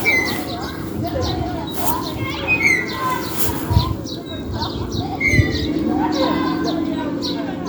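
These sounds carry no audible technical faults.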